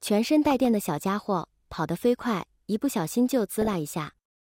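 The audio carries two bursts of DAB burbling, from 0.50 to 0.65 s and from 3.61 to 3.74 s, each a brief patch of noise blips in single sub-bands over the programme. Weak reception most likely let a bit error rate of well under one percent slip past error correction, corrupting samples in individual sub-bands. On a spectrogram these appear as scattered, blocky horizontal patches flickering on and off.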